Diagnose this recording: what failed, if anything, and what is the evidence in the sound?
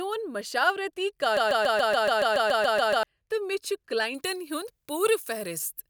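A broken-record loop runs from 1.37 to 3.03 s. A 0.14 s slice of speech repeats exactly twelve times and the speech due in that span is lost. The likely cause is a stalled playback or stream buffer resending its last fragment. The spectrogram shows identical blocks tiling every 0.14 s.

Pre-emphasis is left on from 4.15 s to the end. The treble follows a 75 µs FM boost curve with no matching de-emphasis, reaching about 14 dB at 10 kHz relative to 1 kHz, so the speech turns thin, bright and sibilant. The spectrogram shows a top band raised more strongly toward higher frequencies.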